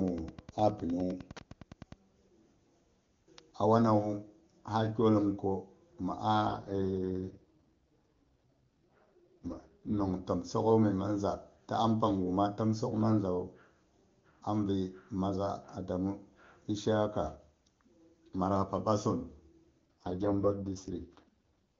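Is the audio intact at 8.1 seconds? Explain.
No. 8.1 s falls inside an AMR rate drop from 6.47 to 10.14 s. The network pushed the AMR-WB codec down to a rate that sounds like 6.6 kbit/s, spending bits on error protection. Bandwidth stays and nothing cuts out, but the speech turns rough, raspy and synthetic.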